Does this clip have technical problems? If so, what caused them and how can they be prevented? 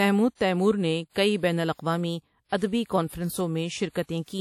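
Yes. Throughout the speech there is plainly audible ringing and a washy hiss that swells and fades with the signal, likely from WMA compression: the transform spreads quantisation noise over tens of milliseconds, and the damage fits a bitrate near 48 kbps. A spectrogram shows nothing above 18.3 kHz, smeared energy around onsets, and holes where weak components were zeroed. Encoding at a higher bitrate, or keeping an uncompressed master, would prevent it.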